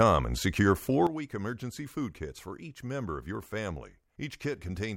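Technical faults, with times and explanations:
1.07 s to the end: sudden gain jump. Right after "and secure", speech and background noise drop together by about 11 dB, likely from a gain change applied without a ramp.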